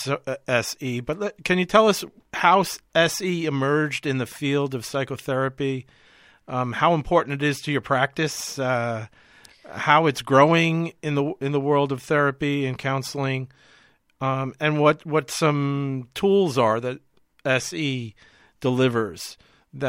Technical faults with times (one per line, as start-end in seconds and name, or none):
none